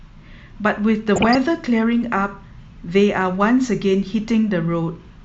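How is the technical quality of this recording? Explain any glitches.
The recording has one glitch, DAB burbling, from 1.16 to 1.35 s in the speech. For about a fifth of a second the sound burbles. Weak reception let bit errors slip past the error correction into the MP2 audio data. The error rate was small, well under one percent. Corrupted samples put short blips of noise in single sub-bands. The length suggests around ten damaged frames.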